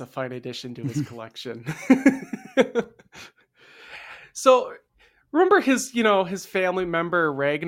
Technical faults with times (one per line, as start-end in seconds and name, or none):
none